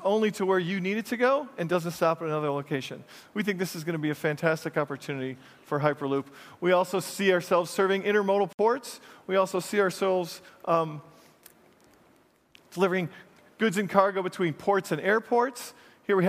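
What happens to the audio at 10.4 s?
Nothing goes wrong at 10.4 s; the audio plays through that moment intact, with no dropout, click or distortion.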